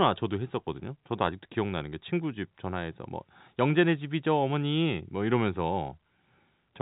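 No technical faults are audible.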